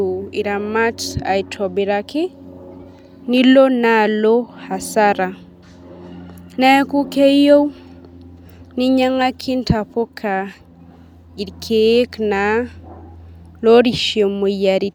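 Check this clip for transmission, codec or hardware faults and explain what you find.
Nothing wrong turns up here; the speech comes through steady and intact, with nothing that points to a problem in the transmission, the coding or the hardware.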